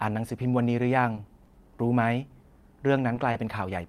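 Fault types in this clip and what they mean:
Repeated packet loss (robotic sound): from 1.15 to 1.56 s, four brief holes open in quick succession, none longer than 20 ms. Each is bridged by extending the preceding sound, about 70 ms patched overall with roughly 40 ms lost, giving a choppy texture.
Short stall from a late packet: at 3.31 to 3.35 s, the playout buffer briefly ran dry when data arrived about 20 ms late. The last sound was held for 20 ms, then playback resumed where it stopped, so nothing is lost, just a faint stretched hitch.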